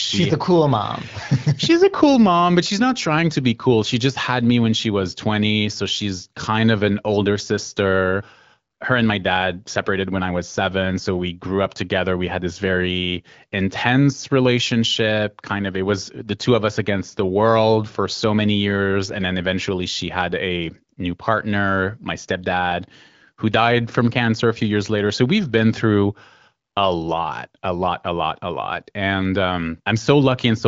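Nothing goes wrong anywhere in the speech here, which comes across as HD Voice at the AMR wideband codec's 15.85 kbit/s rate, with light coding texture and the top end stopping at about 7.6 kHz, as you'd expect from that path.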